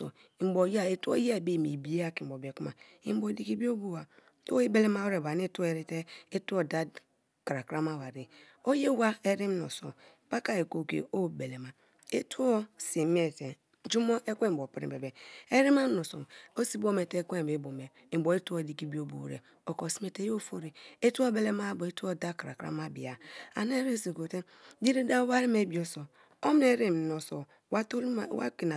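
No technical faults can be heard anywhere in the speech. Nothing in the recording calls for a timestamp or an account of something going wrong.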